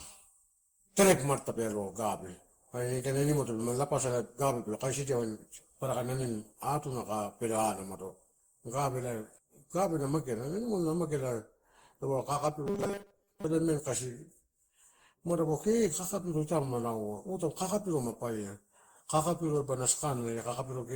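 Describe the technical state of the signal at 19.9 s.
At 19.9 s the speech carries generation loss, present throughout the clip. It sounds swirly, hollow and smeared, with blurred attacks, likely from roughly ten successive Opus encodes at 64 kbit/s, each re-quantising on a shifted frame grid so noise accumulates.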